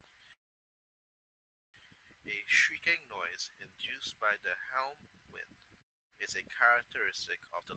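From 0.33 to 1.76 s the speech stops dead for about 1.4 s. A brief tail fades almost at once into silence, then the speech resumes where it left off. This is a call audio freeze: packets were likely held up, the jitter buffer ran dry, and the wait was inserted as a gap with nothing lost.

Between 7.46 and 7.75 s the speech suddenly sounds hurried, running at about 144% speed while its pitch stays unchanged. This jitter buffer speed-up happened because the buffer held more audio than its target, so the receiver cut around 150 ms of tiny pitch-period slices to reduce the delay.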